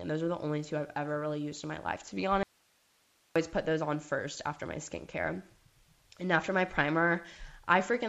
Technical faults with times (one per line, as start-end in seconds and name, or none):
0.00-8.09 clock drift between sender and receiver
0.58-7.92 repeated timing corrections
2.43-3.36 audio dropout to a faint residue